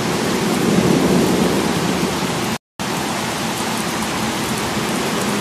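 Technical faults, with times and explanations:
2.57–2.80 s, rebuffering stall: playback stops to silence for about 230 ms, then resumes exactly where it left off. The player exhausted its buffer and waited for data.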